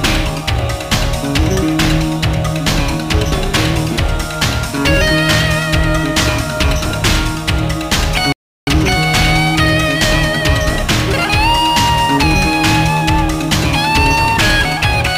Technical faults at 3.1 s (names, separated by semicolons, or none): none